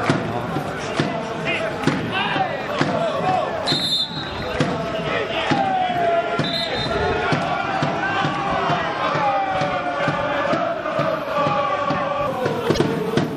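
Throughout the audio, an encoder short of bits has likely applied MP3 compression, with the clear damage fitting a low bitrate of around 64 kbps: weak frequency detail flickers in and out, giving a watery, swirling texture. Damaged data in a compressed stream then disrupts decoding from 12.74 to 12.78 s, as the decoder misreads frames and resynchronises, which is heard as a brief chirp or blip lasting about 44 ms near the end.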